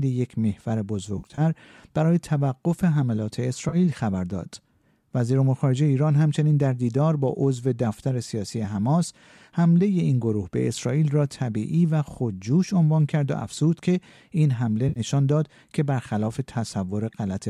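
AAC frame loss with concealment hits at 1.18–1.41 s (about 120 ms lost in short runs), 3.69–3.76 s and 14.89–15.00 s. The decoder rebuilds each gap from the last good spectrum, so speech smears into a phasey, noisy patch instead of falling to silence, as a plain dropout would.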